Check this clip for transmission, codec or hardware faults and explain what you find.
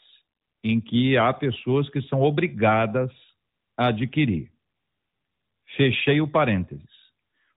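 No faults are audible in this speech clip.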